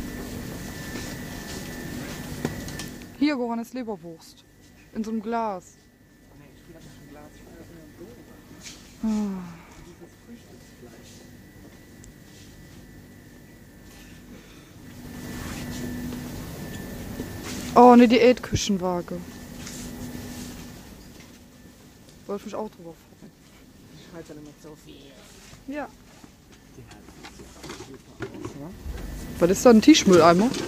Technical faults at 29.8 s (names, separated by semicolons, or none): none